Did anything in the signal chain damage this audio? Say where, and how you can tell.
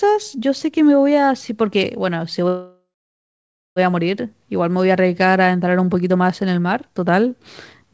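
Yes. From 2.48 to 3.79 s the speech stalls into a fading buzz, then silence, and resumes intact: a call audio freeze, likely from delayed packets emptying the jitter buffer.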